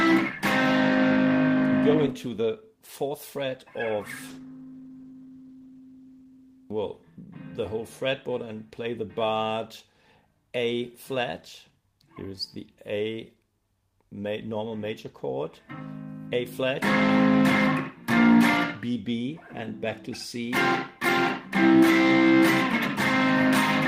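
Call bitrate drop, 4.28 to 7.13 s: the encoder's bit budget falls, which fits roughly 32 down to 16 kbps, coding the sound more coarsely and roughly before it clears.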